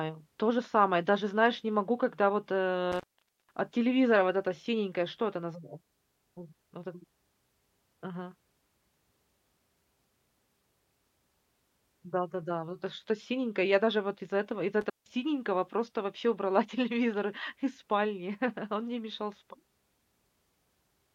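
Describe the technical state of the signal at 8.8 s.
At 8.8 s the speech signal is intact, with no audible fault at that point.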